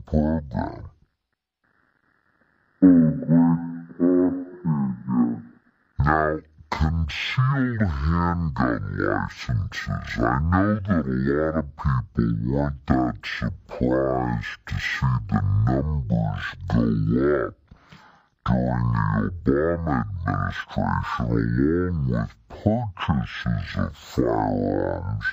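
From the start to the end of the clip, the audio is a stereo read as mono. The left and right samples alternate in the stream. Here they are taken one after another as a single channel. Each moment therefore lasts twice as long. Playback runs at half speed, 0.5 times normal. Pitch drops by 12 semitones, a full octave. Everything sounds slow, heavy and dark. A faint mirrored copy of the sound also sits in the upper half of the spectrum.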